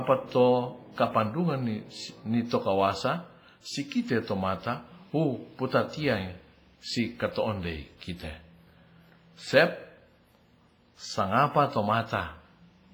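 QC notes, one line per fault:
Throughout: WMA compression. The speech rings and smears, with a washy hiss that rises and falls with the sound. Noise spreads across tens of milliseconds around each change, and faint detail drops out. This is likely a heavily damaged WMA encode, fitting a bitrate around 24 kbps.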